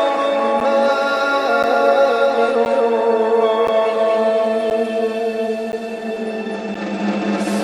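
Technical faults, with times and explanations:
throughout: doubled audio track, a full-band copy at about equal level trailing roughly 300 ms behind, likely a second capture path; the waveform shows every onset repeated, with no decay.
0.60 to 6.75 s: periodic USB or driver dropouts, around seven gaps of about 10 ms, every 1.02 s; ticks from blocked transfers, seen as thin vertical silent stripes.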